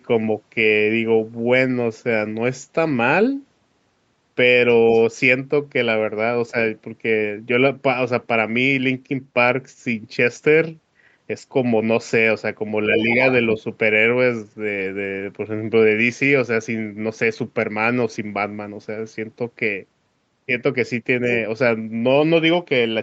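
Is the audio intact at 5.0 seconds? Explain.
No. From 4.94 to 5.01 s, a faint scrap of the other side's voice leaks through, far below the main speech. The likely cause is loudspeaker echo the canceller missed.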